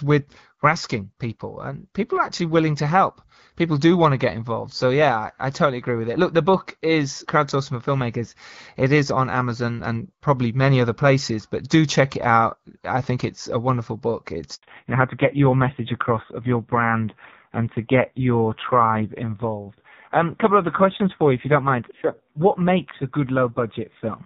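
Just after "it's a wonderful book", a handover gap opens from 14.55 to 14.63 s. The call was being passed between networks and no speech frames arrived during the switch, so the sound drops away abruptly and stays silent for 80 ms until the new link takes over.

When the link resumes at 14.63 s, the call has undergone a fallback to narrowband. The clear wideband HD Voice sound, which fits AMR-WB near 12.65 kbit/s, gives way to what sounds like low-rate AMR-NB around 5.9 kbit/s. Nothing above 4 kHz remains through the end, so speech turns dull and rougher.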